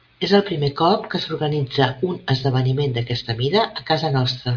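No technical faults can be heard anywhere in the speech recording. Nothing in it calls for a time stamp or a description of a fault.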